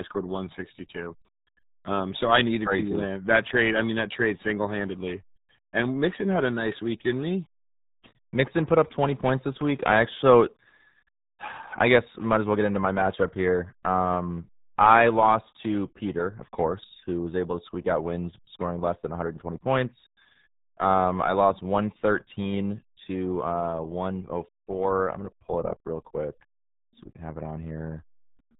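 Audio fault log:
Throughout: RealAudio 14.4 codec, heavy damage; speech sounds muffled and gargly, consistent with roughly 8 kbit/s coding. Spectrogram shows a hard ceiling at 3.8 kHz with smeared harmonics.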